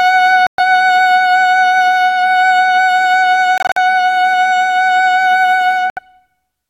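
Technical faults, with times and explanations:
0.47–0.60 s, 3.58–3.78 s, 5.90–5.99 s: Bluetooth dropout, likely: the music falls silent for about 116, 116 and 70 ms as packets miss the headphones, then resumes further on. The middle gap is split into bursts up to 46 ms. A spectrogram shows blank full-height columns, and a waveform shows abrupt flat gaps.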